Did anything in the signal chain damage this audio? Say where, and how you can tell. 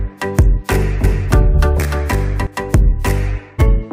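Yes. A doubled audio track runs from 1.04 to 2.47 s. A copy about 5 dB down trails roughly 300 ms behind, likely from a slower second capture path. On a spectrogram it appears as a shifted duplicate.

Compressed frames were skipped at the codec stage, at 1.54 to 1.56 s and 3.58 to 3.62 s. The audio jumps about 150 ms, then 100 ms, ahead, fitting 42.7 ms frames.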